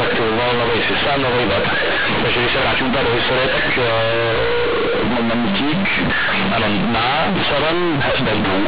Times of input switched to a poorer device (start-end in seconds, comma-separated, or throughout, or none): none